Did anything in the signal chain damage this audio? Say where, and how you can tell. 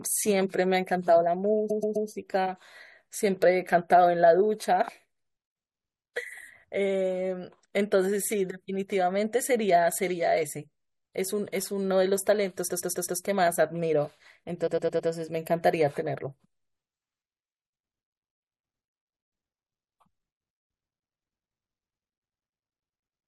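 Yes, repeated frames, likely at the codec or storage stage. The speech stutters at 1.69–2.08 s, 12.68–13.19 s and 14.66–15.09 s, one chunk of roughly 107–128 ms replaying three or four times, stretching the clip.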